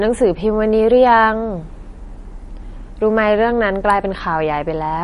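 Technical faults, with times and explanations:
Throughout, likely MP3 compression at a low bitrate around 40 kbps: treble cut above 10.6 kHz and weak frequency lines dropping in and out, giving plainly audible watery, swirling speech.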